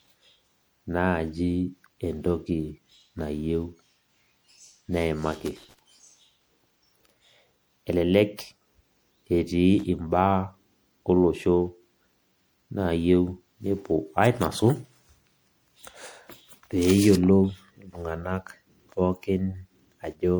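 Right from the start and all the way through, the speech has a swirly, hollow quality, with consonant attacks smeared and a watery wash behind everything. That's more damage than a single lossy encode would leave. It's most likely generation loss: the audio has been through an MP3 encoder around five times, each pass requantising on a shifted frame grid so the holes and noise stack up. The overall bandwidth points to something like 96 kbit/s.

Then at 5.32 to 5.79 s there's a rough burst of scratchy crackle, and a much shorter snap of the same thing at 9.79 to 9.83 s. That's loose connector crackle: a worn or dirty contact flickering between connected and open, chopping the signal in rapid irregular bits.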